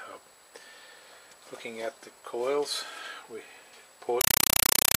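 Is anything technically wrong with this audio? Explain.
Yes. From 4.21 s to the end, the sound is replaced by a compressed stream played as audio. The data pattern fits an AC-3 (Dolby Digital) bitstream, around 256 kbps, passed over a digital link and treated as ordinary PCM samples instead of being decoded. Each encoded frame appears as a dense 5.33 ms burst of noise followed by zero padding, repeating at 31.25 Hz. The result is very loud, harsh chattering static in place of the audio.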